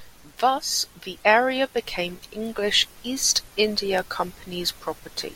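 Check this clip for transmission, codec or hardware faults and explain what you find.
There's one fault here, and it's a clocking problem. From 0.18 s to 5.02 s the speech carries word clock ticks, roughly fifteen of them, landing about every 0.3 s. The receiving device is free-running on its own clock instead of locking to the sender, and the two are off by something like 70 ppm. Each time they slip past each other a single sample gets dropped or doubled, and that glitch comes through as a sharp regular tick.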